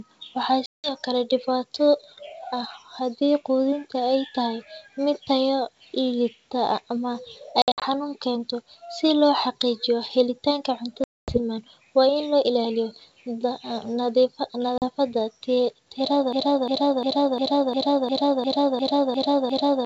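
Packet loss on an ADPCM call cuts hard-edged silent holes at 0.66–0.94 s (180 ms missing), 7.62–7.84 s (140 ms in short gaps, longest 60 ms), 11.04–11.38 s (240 ms) and 14.78–14.86 s (40 ms). Each time the decoder's predictor and step size lose track of the sender's, so speech resumes slightly distorted before settling.

A broken-record loop starts at 16.33 s and runs to the end: a 352 ms fragment repeats back to back ten times, likely from a stalled stream resending its last buffer, while the wideband G.722 sound itself stays clear.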